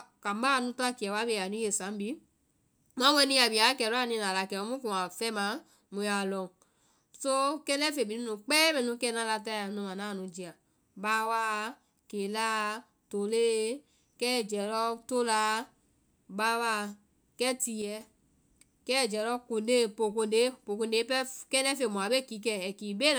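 At 17.82 s the speech drops by about 6 dB for roughly 0.19 s, then snaps back at 18.01 s. That's most likely one channel dropping out: one stereo side went silent briefly, so after the mono sum the shared sound halved in level.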